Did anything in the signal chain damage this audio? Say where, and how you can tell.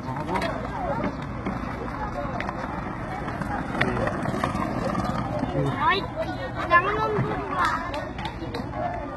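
Yes. HE-AAC compression, likely at the codec stage, runs throughout the clip. The treble is heavily damaged and stops dead at 11.8 kHz. What remains above the crossover is copied from lower bands, so it sounds gritty and metallic, which fits a bitrate near 16 kbps.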